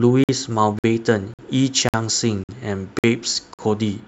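At 0.24 s the speech breaks for 50 ms, and the same hard-edged hole recurs at 0.79, 1.34, 1.89, 2.44, 2.99 and 3.54 s. This is a gap between chunks. Playback pauses after every half-second block. Unlike packet-loss dropouts, nothing is missing, and the rhythm is strictly regular.

From 0.52 s to 4.0 s, pre-emphasis is left on. The treble lift was never undone, so 10 kHz sits about 10 dB above 1 kHz, which fits a 50 µs FM curve. The speech turns thin and hissy. Unlike a harsh microphone, the boost climbs smoothly across the whole top end.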